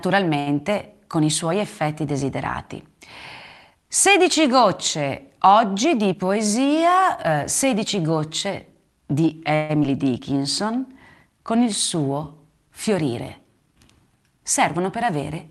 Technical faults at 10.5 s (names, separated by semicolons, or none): jitter buffer slow-down